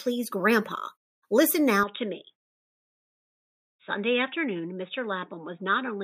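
Input switched to a poorer device at 1.83 s and stays that way to the end. The speech turns abruptly dull and boxy with nothing above 3.8 kHz, drops about 5 dB in level and gains faint new background noise, likely from a narrower-band microphone taking over without any gap.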